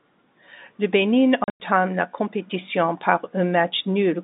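Between 1.44 and 1.6 s, packets went missing and the receiver substituted silence: packet loss filled with silence. About 140 ms of speech vanishes across that 160 ms stretch, the longest hole 100 ms, which fits 20 ms packets. The dropouts start and stop abruptly, inside the narrow 200 Hz to 3.7 kHz G.711 telephone band.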